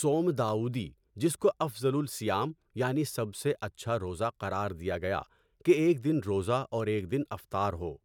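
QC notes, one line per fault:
No faults detected.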